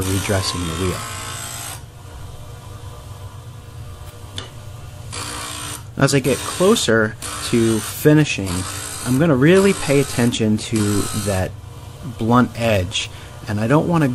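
No technical fault can be heard anywhere in this audio. Nothing in how the sound was captured or reproduced stands out as needing attention.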